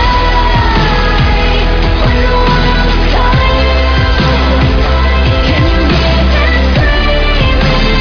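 No technical faults can be heard anywhere.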